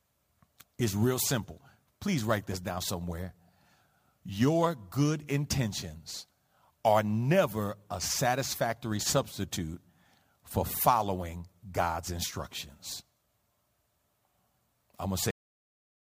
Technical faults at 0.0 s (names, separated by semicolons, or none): none